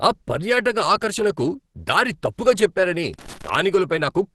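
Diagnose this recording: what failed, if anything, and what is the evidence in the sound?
The codec stage is at fault throughout. The speech sounds hoarse, muffled and grainy, and nothing is present above about 12.2 kHz. This points to a low bitrate. The likely cause is Opus compression in its hybrid speech mode, filling thin bands with noise.

The analogue wiring also failed briefly. A loose connector crackle runs from 3.14 s to 3.55 s as an irregular burst of scratching. A worn or dirty contact was making and breaking rapidly. That chopped the signal into fragments.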